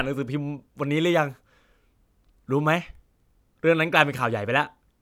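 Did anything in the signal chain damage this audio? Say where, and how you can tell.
No, nothing in the signal chain audibly damaged this speech.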